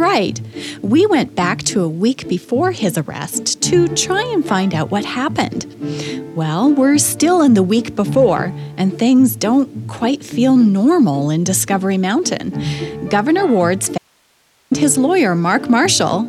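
The signal feed was likely interrupted for about 730 ms while the downstream path stayed open, producing an audio dropout to a faint residue from 13.98 s to 14.71 s. The sound cuts out abruptly mid-flow and returns just as suddenly, with nothing like a natural pause or fade at either edge. The gap is not true silence: only a low hiss remains, sitting roughly 40 dB below the normal level of the material.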